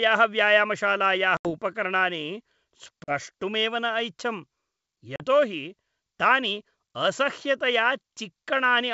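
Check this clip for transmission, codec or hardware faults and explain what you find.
The speech carries three dropouts from packet loss on an ADPCM call, heard through otherwise clear G.722 wideband coding.

Dropouts at 1.37 to 1.51 s (80 ms lost), 3.04 to 3.12 s (40 ms) and 5.16 to 5.20 s (40 ms) cut to silence. The lost packets leave the decoder's predictor and step size out of step, so speech resumes with brief, slight distortion. Waveforms show flat-line gaps. Spectrograms show sharp vertical blank bands.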